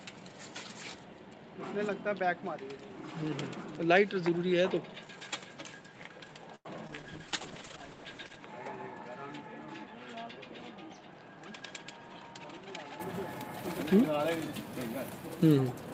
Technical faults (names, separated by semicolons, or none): input switched to a poorer device; short stall from a late packet; short concealed packet loss; call bitrate drop; jitter buffer speed-up